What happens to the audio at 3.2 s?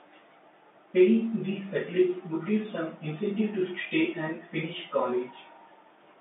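Nothing goes wrong at 3.2 s: the speech continues intact through the telephone-band G.711 path, with no dropout, click or distortion at that moment.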